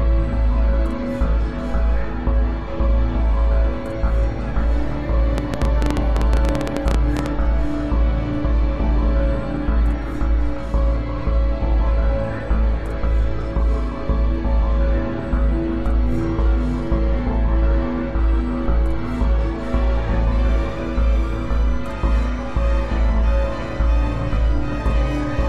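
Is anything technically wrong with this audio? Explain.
Yes. From 5.38 to 7.27 s there is a train of clicks: about twenty sharp pulses at roughly 12 per second, unevenly spaced and standing well above the surrounding sound. They are likely caused by interference from nearby equipment or a faulty connection or power supply that repeatedly injects the same pulse. Unlike random crackle, these clicks share one shape and cluster in a single burst, ticking over both the sound and the gaps.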